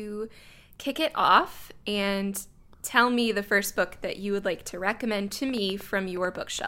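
Right after "like to recommend to", from about 5.5 s to 6.6 s, there's a train of clicks: around ten near-identical pops at roughly 7.3 per second, unevenly spaced, poking a little above the speech. It's likely interference from nearby gear or a faulty connection or power supply.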